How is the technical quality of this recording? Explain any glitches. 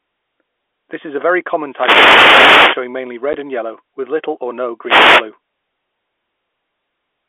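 The speech is carried over a narrowband telephone path, with everything above about 3.5 kHz absent. Three glitches of two kinds break into it.

The wireless microphone noise hits come at 1.69 to 2.87 s, just after "is a very", and at 4.83 to 5.26 s, after "with little or no". The radio link fades as reflected signals cancel at the receiver, and receiver noise swells through the gap. Each is heard as a burst of static swishing over the speech, the first lasting over a second.

The packet loss filled with silence is at 3.33 s, just before "and yellow with little". A 10 ms hole has dropped out of the speech, which fits one lost packet that the receiver replaced with digital silence. The abrupt cut and restart give the hole hard edges.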